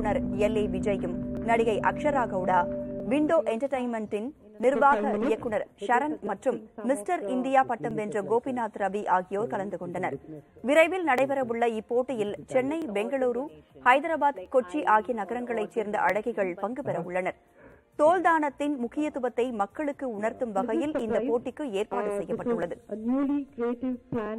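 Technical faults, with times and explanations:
1.37–24.26 s, clock drift buffer slips: two clocks, likely running around 700 ppm apart, force a slip of roughly 50 samples every 1.63 s, heard as regular clicks.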